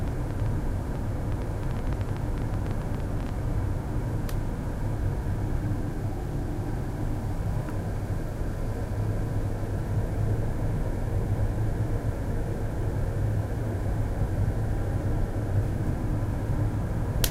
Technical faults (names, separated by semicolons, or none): train of clicks